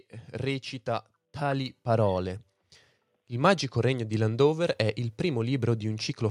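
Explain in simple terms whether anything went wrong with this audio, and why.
Something did go wrong, at 1.68 seconds. That is a microphone volume stepped up fault. The calling software judged the microphone too quiet and turned its input volume up in a single jump. You can hear the speech suddenly get louder. The background noise gets louder at the same moment too. That shared jump is the giveaway: the speaker did not raise their voice, the microphone level changed.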